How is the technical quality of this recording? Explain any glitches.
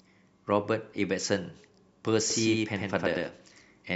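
A doubled audio track starts abruptly at 2.30 s and runs to the end of the clip: from that point the speech is heard twice, with a second full-band copy trailing about a tenth of a second behind and about as loud as the original. This is likely caused by the signal being captured again through a slower path. Because the copy carries no decay or room colour, the result sounds like a hard, flat slapback echo rather than reverberation.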